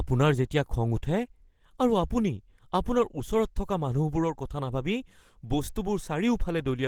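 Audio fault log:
throughout: Opus compression, likely a hybrid-mode encode near 16 kbps. The speech sounds hoarse and grainy, and the spectrogram shows noisy, smeared bands reaching 20.2 kHz.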